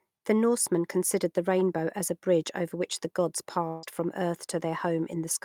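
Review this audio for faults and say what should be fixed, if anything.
From 3.67 to 3.86 s the sound dissolves into a fading buzz for about 150 ms, likely a long network dropout. It never falls fully silent, and about 160 ms is skipped rather than delayed.

From 3.83 to 3.85 s, a single 20 ms lost packet is rebuilt from error correction. It sounds rougher and noisier, but unlike concealed loss there is no gap or fade.

To prevent both, stabilise the network path and enlarge the jitter buffer so bursts of loss are absorbed instead of concealed.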